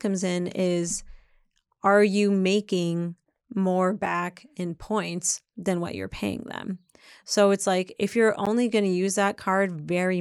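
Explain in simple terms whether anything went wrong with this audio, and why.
Two spots drop out for a split second. Each is a block of digital silence, where a chunk of the audio was replaced by pure zeros, probably because the program didn't fill its output buffer in time. The first is at 4.06 s, right after "are you making more", and lasts about 6 ms, which fits a 256-sample buffer. The second is at 8.46 s, after "it's like if you're", and lasts about 12 ms, which fits a 512-sample buffer. Because the sound switches off and back on with no fade, each gap comes across as a quick tick.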